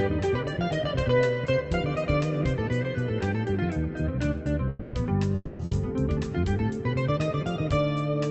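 From 4.69 to 4.96 s, and again from 5.35 to 5.62 s, the sound smears into a fading buzz or hiss for about 240 ms, the second ending in a brief moment of near silence. That portion of the audio is gone when it resumes, the likely cause being a long network dropout.

Right after, from 5.65 to 5.74 s, a shorter held, decaying tail of about 60 ms replaces the sound before it picks up again further on. This is a burst of packet loss, with the receiver stretching the last audio while the missing stretch is skipped.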